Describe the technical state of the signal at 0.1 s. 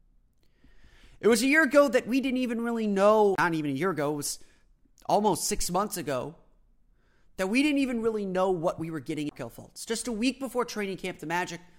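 At 0.1 s the signal is intact, with no audible technical fault at that moment.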